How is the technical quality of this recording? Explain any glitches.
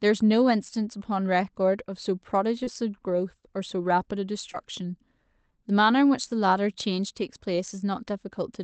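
Two brief glitches, both short concealed packet loss, on speech that came through a call path with an 8 kHz top end, which sounds like Opus at a fairly modest rate. Around 2.63 to 2.69 s, roughly 40 ms of audio never arrived in time, and the receiver papered over it by extending the preceding sound before easing back into the real signal. Around 4.53 to 4.56 s a smaller gap, about 20 ms, got the same treatment. Each registers as a quick smear or wobble.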